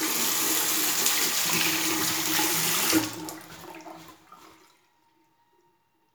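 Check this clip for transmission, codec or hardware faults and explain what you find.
No transmission, codec or hardware faults can be heard in this audio, and the signal has no dropouts, distortion or glitches at any point.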